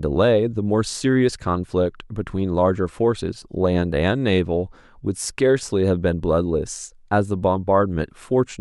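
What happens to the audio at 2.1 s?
Nothing goes wrong at 2.1 s; the speech runs through that moment intact, with no dropout, click or distortion to be heard.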